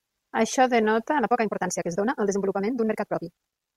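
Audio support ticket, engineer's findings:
Time-stretched section from 1.16 s to the end: speech suddenly runs 1.79x faster with the pitch unchanged, so it comes across rushed. Likely a time-stretch pass squeezing that part to fit a length, dropping short slices to hold pitch.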